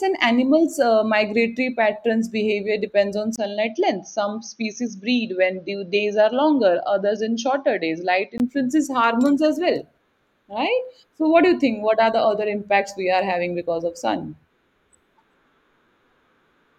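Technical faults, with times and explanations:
3.36 to 8.40 s, input switched to a poorer device. A 20 ms gap marks the switch. The speech then turns dull, with nothing above 6.5 kHz. It drops a few decibels and gains faint new background noise. A narrower-band microphone likely took over. Clarity returns at 8.40 s.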